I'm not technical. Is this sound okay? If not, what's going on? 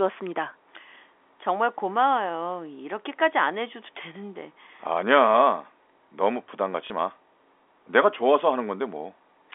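No. There is one short glitch, at 6.87 to 6.90 seconds. It is packet loss with the last packet repeated. The call sends sound in small chunks. One chunk, about 30 milliseconds of speech, went missing. The receiver filled the gap by playing the previous chunk again. The join does not match up smoothly, so you hear a small blip. The narrow telephone sound comes from G.711 telephone coding, which keeps only roughly 300 Hz to 3.5 kHz.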